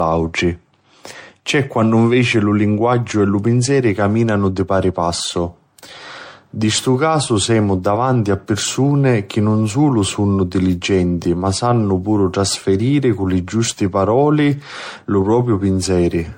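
Speech marred throughout by generation loss: the sound is swirly, hollow and smeared, with blurred consonant attacks, likely from around seven passes through a roughly 64 kbit/s MP3 chain. A spectrogram shows nothing above 16.5 kHz, patchy spectral holes, and softened onsets in the waveform.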